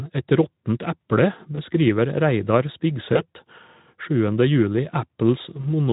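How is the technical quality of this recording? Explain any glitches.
Three brief glitches from VoIP packet loss concealed by the speech codec, at 1.55 to 1.60 s (right after "råttent eple"), 3.13 to 3.22 s and 5.61 to 5.67 s. Each fits a single lost 20 ms frame. The decoder bridged the hole by extending its last pitch and filter at falling gain, so the speech smears into a short buzzy tone or coloured noise that fades. Unlike a plain dropout, there is no silent gap, and the voice stays weak or distorted briefly after each event.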